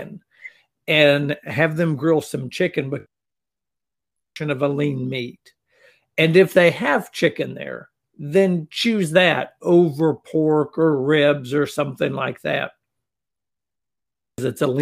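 Nothing goes wrong anywhere in this bit of speech, so there's no technical fault to point to at any moment.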